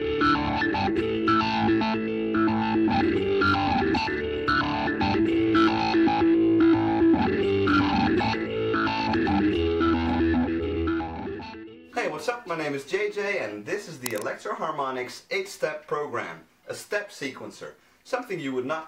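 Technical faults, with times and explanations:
14.06 to 14.22 s, cable scratch noise. A short burst of dense, uneven scratching sits over the sound for about a sixth of a second. It is around 10 dB below the signal. The likely cause is a worn cable, connector or control being moved. Its contact resistance jumps about rapidly as it shifts. Each jump adds a small crackle, and together they blur into a rough, rustling scrape.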